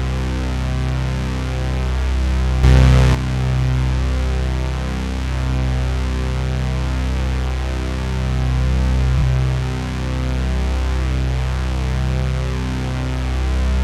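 At 2.64 s a sudden gain jump of about 8 dB lifts sound and background noise together until 3.15 s, likely an unramped digital gain change; the waveform shows an abrupt rectangular step.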